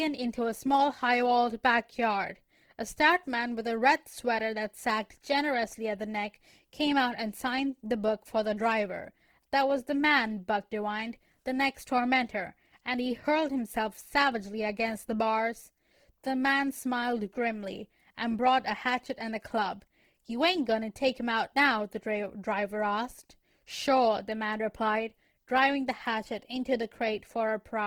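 Throughout, the speech has plainly audible Opus compression, likely a music-mode encode near 16 kbps. Bandwidth reaches 20.2 kHz, but everything sounds grainy and rough.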